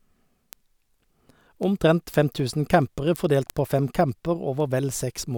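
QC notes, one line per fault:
0.10–5.37 s, word clock ticks: ticks at a steady rate, about every tenth of a second and some 70 in all, through the speech. The receiver runs on its own clock, roughly 300 ppm off the sender's, so a single sample is dropped or repeated at each slip.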